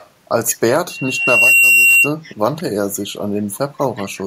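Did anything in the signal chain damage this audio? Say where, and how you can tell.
Yes. Call processing let an echo leak through six times: 0.00–0.09, 0.47–0.56, 1.19–1.26, 2.23–2.35, 2.58–2.63 and 3.78–4.06 s. Each is a faint copy trailing the speech by 174 ms, loudest near 0.47 s. The likely cause is a far-end echo canceller failing to remove its loudspeaker's sound.

A loudspeaker feedback squeal runs from 0.89 to 2.13 s. It is a single 2.8 kHz tone. It swells over roughly 0.7 s to about 10 dB above the speech. A microphone is hearing its own loudspeaker, and the loop gain at that frequency exceeds one.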